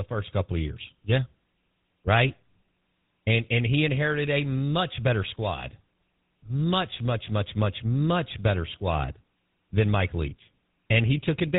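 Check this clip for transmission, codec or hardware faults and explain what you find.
One fault runs through the whole clip. From start to finish the speech sounds plainly buzzy and gravelly, with nothing above 4 kHz. That is the GSM full-rate codec, which fits 13 kbps: it models the vocal tract and drives it with sparse, regularly spaced pulses.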